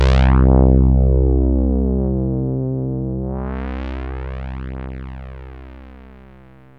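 No technical faults can be heard anywhere in this audio. Nothing in it calls for a time mark or a closer look.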